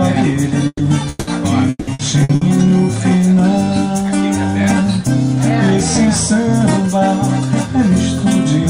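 A burst of packet loss at 0.67 to 0.82 s: 120 ms of missing audio is patched by stretching the last sound, which fades to 40 ms of silence before resuming further on.

At 1.09 to 1.30 s, the last sound is held for 180 ms and then jumps ahead with that stretch missing, most likely a long network dropout.

Repeated packet loss (robotic sound) runs from 1.69 to 2.44 s. Four gaps, the longest 180 ms, are each patched in turn, leaving about half the span concealed and choppy.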